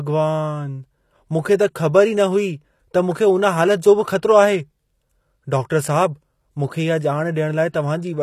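From start to finish, the treble of this speech has a synthetic edge. S sounds come out gritty and lispy, with a metallic sheen. Nothing is present above 14.9 kHz. The pattern points to HE-AAC compression, likely at a low rate that fits about 24 kbps. Only the lower band is truly coded. The upper band is rebuilt by copying lower content upward, so its harmonics fail to line up with the real ones.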